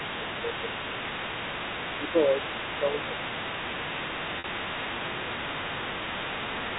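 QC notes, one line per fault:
Throughout: other side's voice leaking through. A second voice sits under the speech for the whole clip, about 10 dB below it. It is likely loudspeaker echo that the echo canceller did not fully remove.
0.18–0.72 s, 1.99–2.38 s, 2.65–3.25 s, 3.6–3.77 s, 4.9–5.95 s, 6.49–6.79 s: speech suppressed in double talk. The main speech dips while the other voice is active. The drops are around 5 dB, and deeper, around 10 dB, at 2.65 s and 3.6 s. The likely cause is the canceller turning both voices down when it cannot separate them.
4.39–4.44 s: packet loss with pitch repetition. About 50 ms of audio is missing, which fits a handful of short packets. The receiver repeats the last pitch period to fill the gap. You hear a brief held, buzzy tone that fades before the sound returns.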